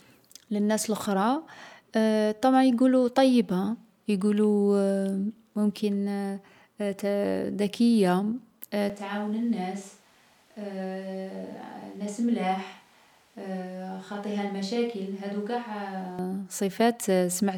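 From 8.90 to 16.19 s the speech abruptly turns roomy, hollow, bass-light and about 10 dB quieter, likely from a switch to a distant microphone.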